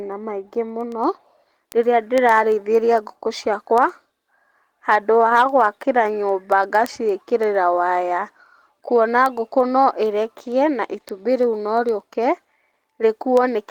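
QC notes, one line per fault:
0.12–13.60 s, word clock ticks: a steady train of ticks, around a hundred of them, spaced about a tenth of a second apart across the speech. The receiving device is running on its own clock rather than locking to the sender's digital link, with a mismatch of roughly 200 ppm. Each time the two clocks slip past each other, a sample is dropped or repeated, which fits a single-sample slip per tick.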